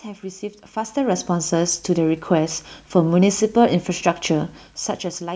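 Nothing is technically wrong with this speech recording.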